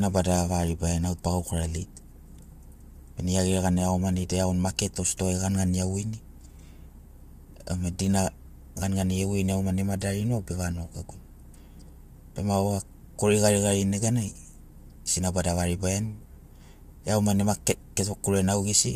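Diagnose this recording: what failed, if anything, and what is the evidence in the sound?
The codec stage is at fault, with damage plainly audible across the whole speech recording. Voices sound rough and grainy, noise fills the gaps between harmonics, and nothing is present above 15.6 kHz. That combination points most likely to low-delay AAC compression (AAC-ELD) at a rate that fits about 32 kbps. Its short frames resolve pitch harmonics poorly and leave few bits. A plain low-pass filter would cut the top band cleanly without adding this grain.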